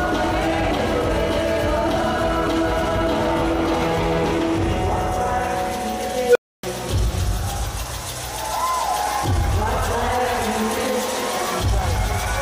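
At 6.24 s a tone around 500 Hz swells to a loud, clipped squeal in about 0.12 s, then the sound drops out for roughly 0.28 s, ending at 6.63 s. This is an unstable filter: a recursive filter's feedback grew without limit until its values overflowed and it reset.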